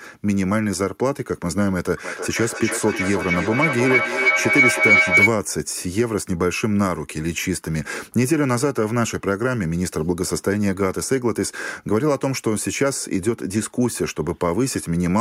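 Two devices in the same room on one call formed a loop that gained level on each pass, so this speech recording breaks into feedback howl from 2.04 to 5.35 s: a tone near 2 kHz, pulsing roughly every third of a second and peaking about 5 dB above the speech.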